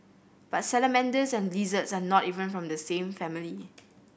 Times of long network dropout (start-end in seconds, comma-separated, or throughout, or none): none